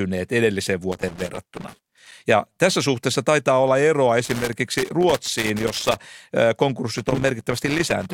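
Loose connector crackle hits at 0.92–2.12 s, 4.24–6.04 s and 6.98–8.13 s. A worn contact keeps breaking, chopping the speech into irregular scratchy bursts.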